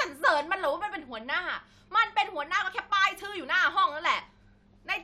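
No technical faults can be heard anywhere in it.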